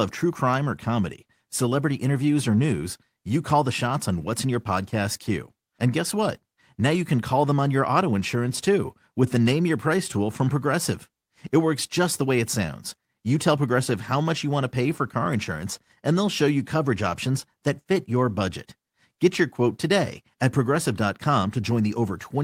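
No technical faults can be heard anywhere in the speech.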